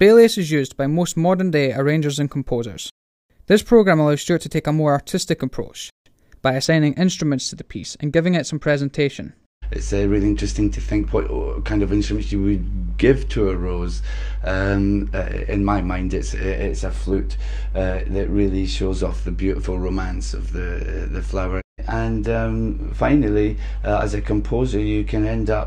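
From 6.65 s to the end there's channel delay (comb filtering): one side lags the other by a tiny amount, a couple of samples or so, and the mono sum cancels around 10 kHz. The top end goes dull.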